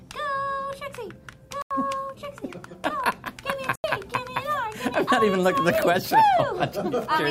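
A short hole appears twice, at 1.62 to 1.71 s and 3.76 to 3.84 s, each about 85 ms long. These are blocks of digital silence: the output buffer likely went unfilled, so the sound cut out abruptly, which fits a 4096-sample buffer.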